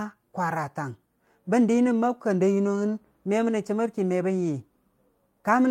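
No audible technical faults here.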